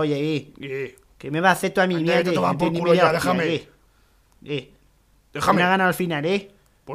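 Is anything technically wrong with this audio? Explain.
Yes. From 1.41 to 2.52 s, a drift correction step: speed rises 5.3% and pitch about 90 cents, then snaps back, likely a clock-sync resampler adjusting its buffer.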